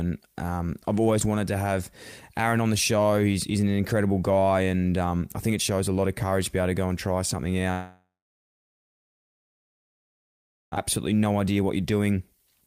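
A long network dropout, likely from audio failing to arrive, interrupts the speech from 7.71 to 10.78 s. The receiver stretches the last sound into a fading buzz before about 2.6 s of silence, and 1.6 s of speech never returns.

From 11.12 s to the end at 12.66 s, a jitter buffer speed-up trims short pitch-period pieces to shed the built-up delay, roughly a fifth of a second in all. The speech runs at 115% speed at unchanged pitch and sounds hurried.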